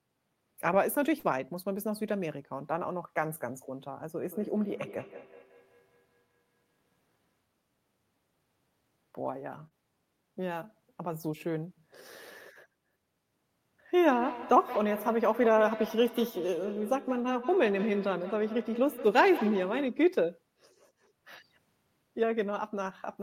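At 1.19 to 1.26 s the speech has a short concealed packet loss. About 40 ms of audio arrived too late for the decoder, and the receiver filled the gap by extending the preceding sound before blending back into the real signal. The result is a brief smear in the speech where the true content is missing.

From 4.23 to 7.41 s there is a feedback echo between two devices. A second device on the same call plays the far-end audio into a microphone that sends it back, and that device's echo canceller cannot remove it. Each syllable returns at a regular spacing of roughly 150 ms, thinner and more ringing than the original, at most about 20 dB below the speech.

At 9.67 to 9.74 s a second short concealed packet loss produces another short smear. Here about 32 ms of synthesised audio covers a 40 ms hole.

The feedback echo returns from 14.08 to 20.08 s with the same repeat interval of roughly 150 ms. 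This time it is much stronger, peaking about 11 dB below the speech.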